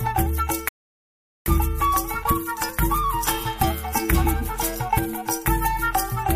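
A rebuffering stall runs from 0.69 s to 1.46 s: the audio drops abruptly to silence and then picks up again at exactly the point where it broke off, with nothing skipped or repeated. The player exhausted the audio it had already downloaded and had to wait for more data before continuing. The gap inserts about 0.78 s of dead air into the timeline, so the rest of the sound arrives late but complete.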